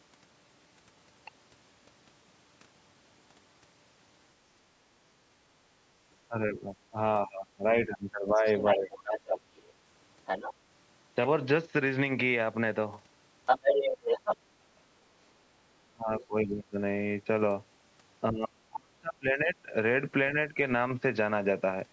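From 6.27 to 8.91 s the speech is suppressed in double talk. It dips by up to roughly 20 dB. The echo canceller likely heard both sides at once and turned everything down. From 8.46 to 9.64 s the other side's voice leaks through, a little below the talker. It is likely loudspeaker echo the canceller missed. It returns at 10.26 to 10.54 s and, as loud as the talker, at 13.46 to 14.37 s. Suppression hits again at 15.93 to 16.76 s, with a brief faint leak at 16.20 to 16.25 s. It comes back deeper, near 35 dB, at 18.31 to 19.74 s. A slight dip follows at 20.50 to 20.57 s.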